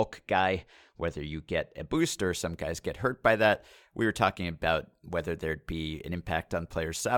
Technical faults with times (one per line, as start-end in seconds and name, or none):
0.00-1.97 channel delay (comb filtering)